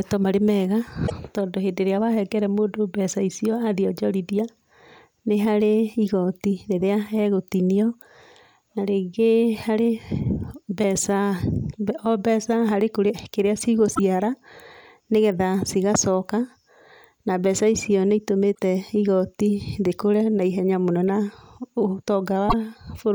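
Short glitches of about 80 ms cut into the speech at 1.03–1.12 s, 13.91–13.99 s, 18.51–18.59 s and 22.45–22.54 s. These are damaged data in a compressed stream: corrupted bytes make the decoder misread frames and lose sync until it finds the next header.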